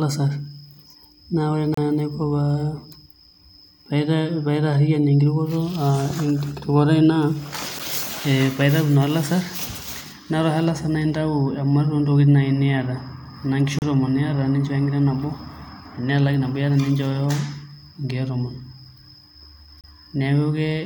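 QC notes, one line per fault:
1.74–1.78, 7.79, 13.79–13.82, 19.81–19.84 s: gap between stream segments. Sharp-edged silent holes of roughly 8 to 33 ms, six seconds apart, the one at 7.79 s right after "tenkirukoto aai naa". Segment timestamps don't quite meet, so the player pads the gap with silence.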